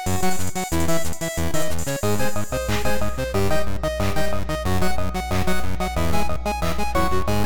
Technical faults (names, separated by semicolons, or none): mains hum